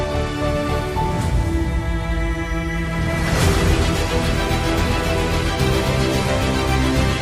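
At 2.99 s, the adaptive stream switches to a lower bitrate until the end. The quality suddenly worsens without any gap, with more codec artefacts, which fits a 64 to 24 kbit/s drop.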